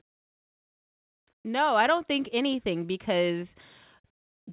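Nothing stood out on listening to this speech, which carries the narrow, telephone-band sound of a G.711 call path with nothing above 4 kHz.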